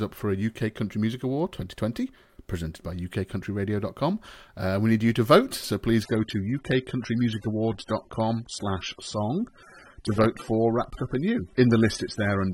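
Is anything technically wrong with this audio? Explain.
Yes. From 6.03 s, right after "to vote so please", to the end, the adaptive stream switched to a lower-bitrate version, sounding like a drop from roughly 96 kbit/s AAC to about 27 kbit/s. The speech abruptly loses everything above 11.7 kHz and turns duller and more artefact-laden, with no gap.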